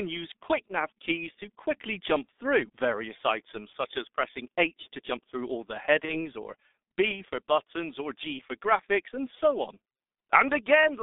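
Throughout the clip, the G.723.1 codec heavily damages the speech. The line is cut to roughly 250 Hz to 3.6 kHz, and the slow-updating voice model leaves it muffled and hoarse with smeared consonants, which points to a rate near 6.3 kbit/s rather than a cleaner narrowband codec.

From 6.05 to 6.26 s, VoIP packet loss concealed by the speech codec follows a 30 ms loss. The decoder stretches the last pitch and filter into a fading sound and stays weakened afterward, unlike a clean dropout's abrupt silence.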